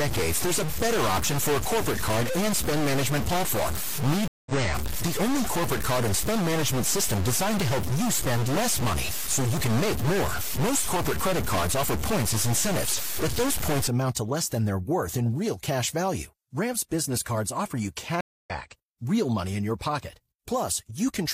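A data bit that is likely stuck at a fixed value corrupts the speech from the start until 13.88 s, pushing about half the samples off by that bit's weight. The result is distortion, with noise filling the pauses. At 4.28 s the stream connection drops and the player reconnects with a fresh decoder: 184 ms of silence, then the speech resumes roughly 150 ms further on, with the first frame muted or fading in. The same stream reconnect recurs at 18.21 s, with 249 ms of silence and a jump of about 200 ms.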